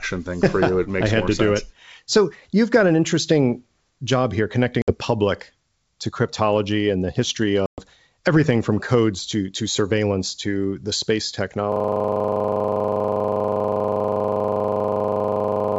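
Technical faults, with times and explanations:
4.82 to 4.94 s and 7.66 to 7.81 s, packet loss on an ADPCM call: after "an interesting job here" and "cryptology and the history", about 60 ms and then 120 ms of sound drop to hard-edged silence, a few packets and then several. The decoder's predictor and step size lose step with the sender's, so "public to cryptology and" and "everything from codes to" come back slightly distorted before settling. A waveform shows flat gaps with abrupt edges and a spectrogram shows blank columns.
11.72 s to the end, system hang loop: after "surveillance to the space", the system freezes while the audio hardware keeps replaying one 40 ms stretch of its buffer about 100 times. The loop repeats 25 times a second, giving a steady buzz. A waveform shows an identical repeating block, and a spectrogram shows evenly spaced vertical stripes.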